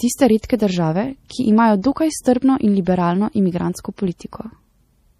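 A speech recording that was likely squeezed through MP3 compression at a low bitrate, consistent with roughly 40 kbps, leaving nothing above 15 kHz. Throughout, the encoder's starved, flickering frequency lines give a plainly audible watery swirl, with chirpy s sounds and smeared onsets.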